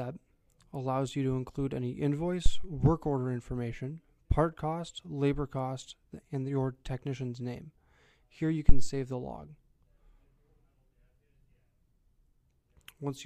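Phantom power thumps at 2.46–2.72 s and 8.69–8.94 s: a supply switched on a live input pushes a voltage step through the coupling capacitors, giving a deep low thump decaying in roughly 60 ms, peaking near -10 dBFS, then about -6 dBFS.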